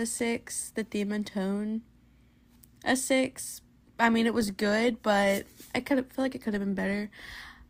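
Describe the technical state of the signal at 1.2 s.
At 1.2 s the speech signal is intact, with no audible fault at that moment.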